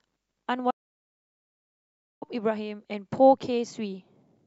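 At 0.71 s the speech cuts off mid-flow into an audio dropout to silence. The gap lasts about 1.5 s, to 2.22 s. It is dead digital silence, with no room tone. The input was likely lost while the recorder kept writing zeros.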